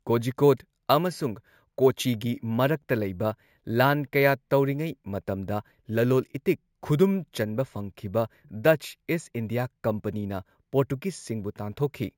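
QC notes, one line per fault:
Throughout: imaging from sample-and-hold upsampling, speech raised from 16 kHz to 48 kHz by plain sample repetition, so mirrored copies from 8 to 16 kHz add metallic fizz about 23 dB down.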